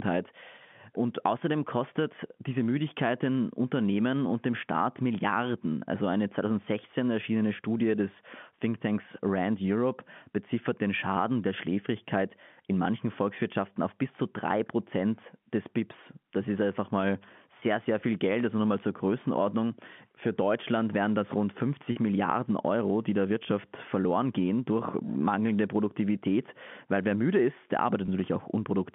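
Packet loss with pitch repetition occurs at 17.60–17.62 s, 21.92–21.96 s and 28.06–28.08 s, over the G.711 telephone band. Missing stretches of about 20, 40 and 20 ms were bridged by repeating the last pitch period, giving brief held, buzzy notes.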